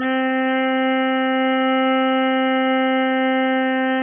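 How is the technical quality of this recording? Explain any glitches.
The recording is poor: the music sounds heavily degraded from start to finish. Throughout, nothing is heard above about 3.5 kHz, and smeared, warbling artefacts stack on each other. That layering points to transcoding between lossy codecs, likely a very low-rate AAC pass re-encoded as low-rate MP3, rather than one encoder's artefacts.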